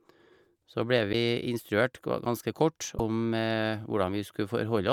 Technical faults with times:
1.12-1.14 broken MP3 bit reservoir
2.96-3.00 broken MP3 bit reservoir

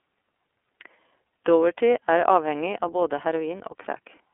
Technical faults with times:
0.00-4.34 iLBC codec

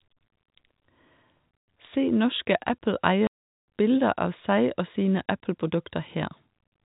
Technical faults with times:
1.58-1.67 packet loss filled with silence
3.27-3.65 packet loss filled with silence

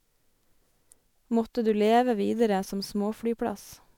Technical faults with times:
0.00-3.98 generation loss

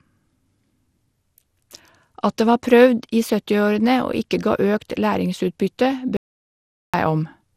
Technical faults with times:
0.00-7.56 generation loss
6.17-6.94 audio dropout to silence

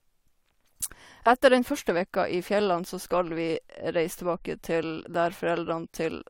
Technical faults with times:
none

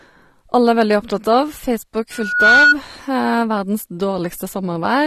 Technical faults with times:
0.00-5.06 AAC compression
2.12-2.75 loudspeaker feedback squeal

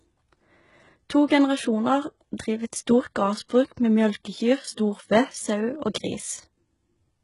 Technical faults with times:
0.00-7.24 HE-AAC compression
3.48 pre-echo

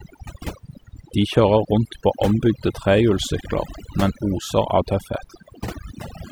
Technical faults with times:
0.00-6.31 overdone noise removal

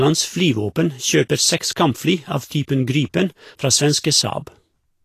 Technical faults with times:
0.00-5.04 Vorbis compression

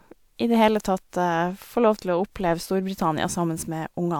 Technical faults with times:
none

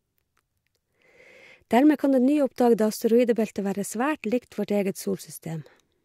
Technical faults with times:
none

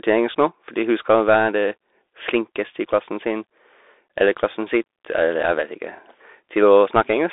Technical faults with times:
0.00-7.33 Bluetooth CVSD headset codec

